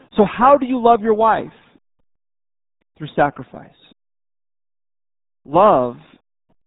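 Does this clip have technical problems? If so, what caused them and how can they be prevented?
Yes. The speech runs through the RealAudio 14.4 codec for its whole length, with heavy damage: nothing passes above 3.8 kHz, and the low 8 kbit/s coding leaves the speech muffled and gargly. To prevent this, encode at a higher bitrate with a wideband modern codec.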